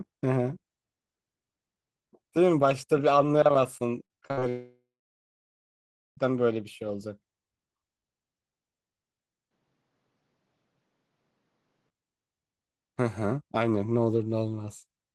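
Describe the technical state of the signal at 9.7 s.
At 9.7 s the speech sits inside a stretch from 9.51 to 11.90 s where the sound turns duller and boxy, most likely an input switched to a poorer device. The substitute device passes nothing above 7.6 kHz, so a spectrogram shows the upper band cut off flat across that span, with a faint new noise floor some 50 dB down. The waveform shows no gap at either switch and roughly the same level throughout.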